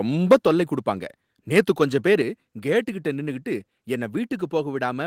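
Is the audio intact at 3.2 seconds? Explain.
Yes, the audio is intact at 3.2 seconds, with no dropout, glitch or other fault at that point.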